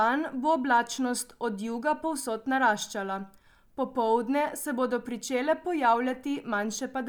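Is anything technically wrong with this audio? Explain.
No, nothing technically wrong can be heard here.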